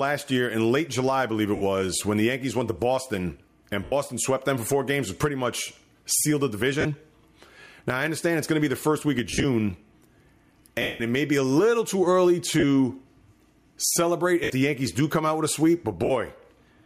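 Speech, marred by two faults. Throughout, the level swings by about 10 dB, so loud and quiet passages sit unnaturally close together and the speech sounds squashed. This is gain pumping, likely from input gain set far too high with a fast limiter or compressor clamping down on every peak. On top of that come eight bursts of lost LE Audio frames, at 1.56 s (50 ms), 3.84 s (80 ms), 6.81 s (40 ms), 9.30 s just after "the first week of" (100 ms spread across 140 ms), 10.82 s just before "it may be a" (180 ms), 12.60 s right after "a little too early" (30 ms), 14.44 s (70 ms) and 16.05 s (50 ms). In each gap the LC3 decoder's concealment repeats the last spectrum with randomised phase, so tonal speech turns into a noisy smear, and the longest loss at 10.82 s fades toward silence. The gap lengths fit 10 ms frames.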